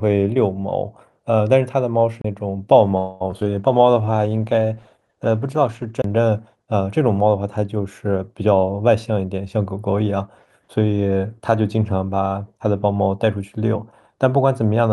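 At 2.21 to 2.24 s there is a CD skip. The laser jumped to another turn of the spiral, so playback mutes for roughly 30 ms with a tick and resumes from a different place. On a waveform this shows as a short flat gap with a discontinuity where the sound picks up out of sequence.

From 2.97 to 3.22 s the sound stalls for 234 ms and is stretched into a fading buzz before it continues. This is a call audio freeze, likely caused by held-up packets draining the jitter buffer. Nothing is lost, but 234 ms of delay is inserted. A spectrogram shows smeared, repeated harmonics decaying across that span.

Three instances of short concealed packet loss follow at 3.30 to 3.34 s, 3.40 to 3.43 s and 3.45 to 3.47 s, where 20, 40 and 20 ms of audio never arrived. The first two are patched with 12 and 13 ms of extrapolated sound, heard as brief smears. The third gets no fill and simply drops out. Each appears as a small blurred or broken patch in the spectrogram.

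A call bitrate drop from 64 to 17 kbps runs from 3.59 to 6.28 s. The encoder codes coarsely and cuts the high band, so the sound turns muffled and watery. On a spectrogram the upper frequencies vanish abruptly and the remaining energy looks blocky.

Inside that stretch, at 3.77 to 4.13 s, a jitter buffer slow-down plays the audio at 85% speed without changing pitch. It adds 60 ms by repeating pitch periods, which draws sounds out. A spectrogram shows the harmonics held longer.

A second CD skip at 6.02 to 6.04 s gives another roughly 30 ms mute, tick and jump.

From 8.15 to 9.93 s a jitter buffer speed-up runs the audio at 113% speed at the same pitch. Roughly 200 ms is trimmed by cutting out pitch periods, so the passage sounds hurried. On a spectrogram events arrive compressed in time while the harmonic spacing stays unchanged.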